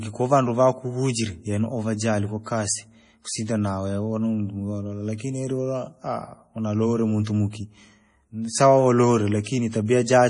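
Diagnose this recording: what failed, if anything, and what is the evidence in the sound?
Speech sounds heavily watery and swirly throughout, with nothing above 10.5 kHz. This is likely MP3 compression at the codec stage, fitting a 32 kbps stream.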